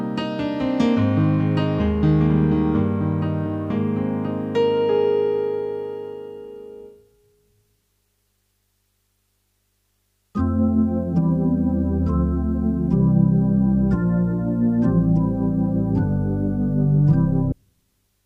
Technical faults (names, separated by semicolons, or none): stream segment skipped